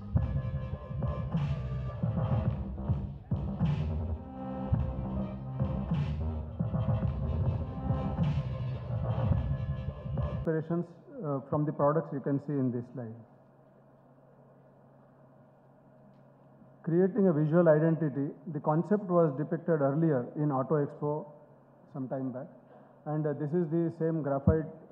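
No technical faults can be heard anywhere in the clip.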